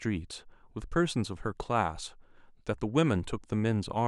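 Nothing in this speech recording points to a technical fault in the signal chain.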